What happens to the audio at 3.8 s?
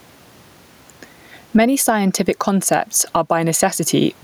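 At 3.8 s the speech shows gain pumping, as it does throughout. The room noise sits about 44 dB below the speech, and the gain swings by around 15 dB. Loud and soft parts sound squashed together. The likely cause is gain set far too high, with a fast limiter pulling it down.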